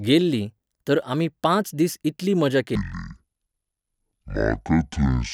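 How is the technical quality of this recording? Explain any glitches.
The recording has one clear glitch: from 2.75 s to the end at 5.34 s, the speech is played at the wrong speed. The voice suddenly drops to a deep, sluggish drawl, roughly ten semitones lower, with every syllable stretched. This is a section at the wrong speed, most likely from that stretch being played against the wrong clock at half speed (0.5x), so pitch and tempo fall together.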